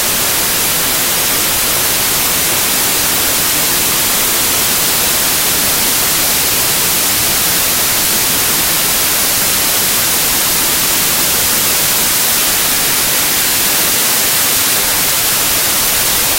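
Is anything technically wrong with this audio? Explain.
Yes. Wrong sample width runs through the entire clip. The audio appears to have been written as packed 24-bit integers and read back as 32-bit integers, so each read value takes four bytes where only three belong to one sample. Most values straddle two original samples, and only a few line up with the real signal's top bits. The result is loud, harsh noise with the original sound faintly buried inside, running about 1.33 times too fast and raised in pitch.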